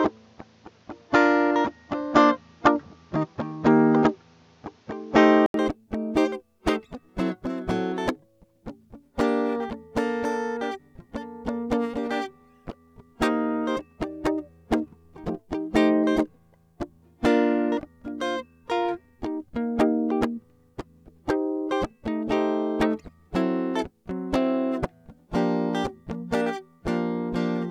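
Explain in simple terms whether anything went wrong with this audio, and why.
For the first 5.54 seconds the music sounds dull and boxy, with nothing above about 7.2 kHz, a faint background noise, and a slightly different loudness. At 5.54 s there is a brief gap of about 80 ms, then the full, clear sound comes in. The likely cause is an input switched to a poorer device: the recording started on a weaker microphone or headset, which cuts the high end and adds its own noise, and then moved to a better one.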